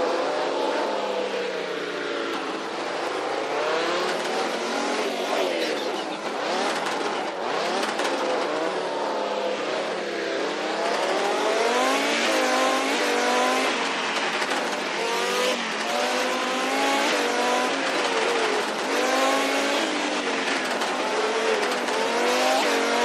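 Nothing stood out on listening; no technical problem could be heard anywhere in the recording.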